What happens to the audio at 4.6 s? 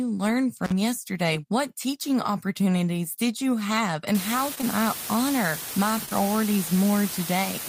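From 4.15 s onward, low bit depth with dither adds a steady, even hiss, loud at roughly 10 dB below the speech and consistent with about 4 bits. It stays clean noise rather than gritty distortion.

Short concealed packet loss hits 4.55, 4.58 and 4.61 s, ending by 4.65 s. Each time 20 ms is missing, and the receiver fills 18, 10 and 11 ms of it by extending the preceding sound before blending back, giving a brief smear or wobble instead of a silent gap.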